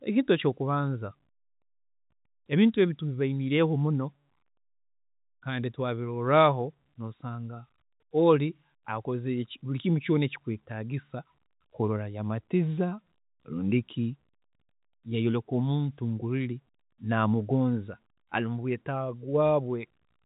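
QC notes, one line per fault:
No faults are present in this speech recording. The G.711 telephone coding is heard as the usual narrow telephone band with nothing above 4 kHz, and its quantisation noise stays faint beneath the signal.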